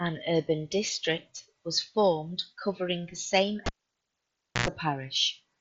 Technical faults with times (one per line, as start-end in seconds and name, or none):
1.37-1.39 concealed Bluetooth headset packet loss
3.66-4.68 cable pulled and plugged in